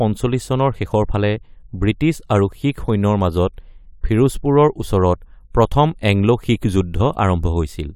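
Nothing in this bit of speech calls for comment, as no technical faults turn up anywhere in it.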